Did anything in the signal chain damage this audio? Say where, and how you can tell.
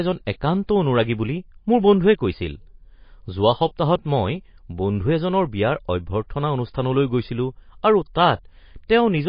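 Yes. Likely MP3 compression at the codec stage, throughout. Nothing remains above 5.1 kHz, where a starved encoder cut the treble. Plainly watery damage fits about 24 kbps.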